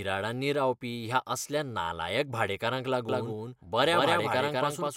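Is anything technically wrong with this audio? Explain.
Yes. From 3.09 s, just after "ह्या असल्या नालायक भाडेकारांक", to the end, the speech has a doubled audio track. A second full-band copy trails about a fifth of a second behind at roughly equal level, likely from a slower parallel capture path. It sounds like a dry, flat echo. A spectrogram shows every syllable repeated, and the waveform's envelope shows shifted duplicates that start abruptly.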